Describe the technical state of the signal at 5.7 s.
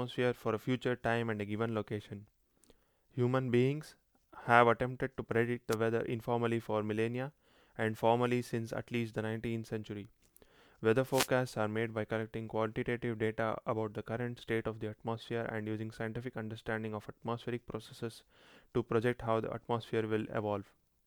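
At 5.70 s the signal takes a wireless microphone noise hit lasting until 5.76 s, about 56 ms in all. The radio link from the analogue FM transmitter briefly fades as reflected paths cancel the direct signal at the receiver, so the receiver's own noise floor rises through the audio. It is heard as a short swish of static cutting across the speech before the carrier recovers and the signal returns.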